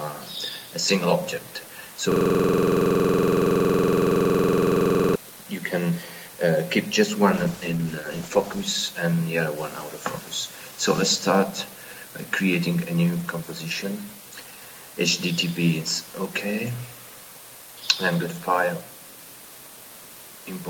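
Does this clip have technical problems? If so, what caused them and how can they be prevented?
Yes. From 2.12 to 5.16 s there is a system hang loop. One 46 ms slice of audio repeats exactly, about 65 times. The repetition rate is 21.5 Hz. The loop length fits a 2048-sample buffer. The host or driver stopped supplying new data, and the sound hardware kept replaying its ring buffer. Keeping the audio thread high-priority and free of blocking calls, with a watchdog that mutes on underrun, prevents this.

From 7.34 to 8.71 s there is a call bitrate drop. The sound turns rough, watery and muffled for about 1.3 s, then recovers. The change in quality points to the encoder falling from roughly 48 kbps to 12 kbps after the call's bandwidth estimate collapsed. At that rate the codec quantises coarsely and trims the high frequencies. A stable, uncongested network and a sensible minimum bitrate in the call settings prevent this.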